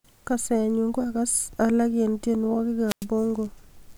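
At 2.86 s the speech breaks up in a wireless microphone squelch dropout lasting until 3.06 s. The radio link from an analogue FM transmitter weakens, and as the carrier sinks the receiver's output fills briefly with hiss before its squelch circuit shuts the audio off. That mute leaves a gap of near silence of about 0.1 s. The receiver then reopens once the signal recovers, and the speech resumes at 3.06 s.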